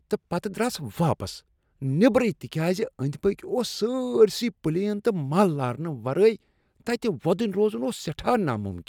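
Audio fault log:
No faults were found in this speech recording. Nothing in the audio calls for a log entry.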